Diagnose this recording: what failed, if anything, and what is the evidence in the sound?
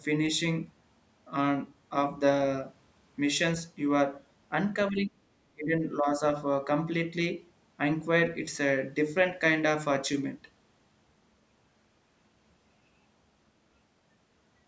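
The speech dips sharply in three bursts, at 4.9 to 5.15 s, 5.54 to 5.83 s and 6.0 to 6.22 s, falling by around 20 dB in the first two and about 10 dB in the last. In call processing, this is likely speech suppressed in double talk, with the echo canceller ducking the talker along with the far-end echo.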